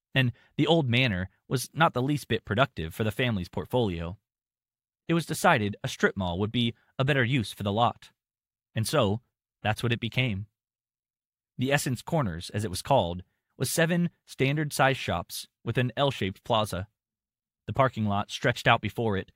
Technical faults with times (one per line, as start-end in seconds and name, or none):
none